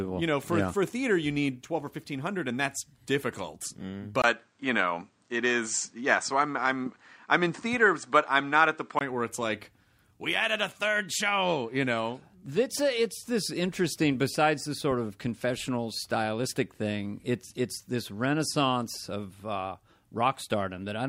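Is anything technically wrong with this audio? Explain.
Yes. From 4.22 s to 9.01 s there is what sounds like an input switched to a poorer device, likely the recording changing to a different microphone or headset profile partway through. There is a brief gap of about 20 ms at the switch. The speech then loses everything above 9 kHz and sounds duller. The level shifts by about 5 dB, and a new background noise appears, sitting roughly 45 dB below the speech. The fuller sound returns at 9.01 s.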